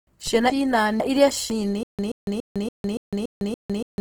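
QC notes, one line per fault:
throughout: Opus compression. The likely cause is an Opus encoder in its music mode running short of bits, which fits a low rate around 16 kbps. Bands are refilled with folded or noise content, so the speech sounds grainy and rough, though bandwidth stays full up to 20.1 kHz.
0.50–1.50 s: chunks out of order. A 500 ms chunk of speech was delivered or written one chunk late and plays after the chunk that should follow it. Nothing is lost, but the sequence is jumbled, and there are three hard joins.
1.83–4.00 s: stutter with silent gaps. The likely cause is a stalled stream that replays its last fragment on each retry and then runs dry. A 129 ms burst returns 7 times every 285 ms, separated by 156 ms of digital silence, until the clip ends. The speech that should fill this span is lost.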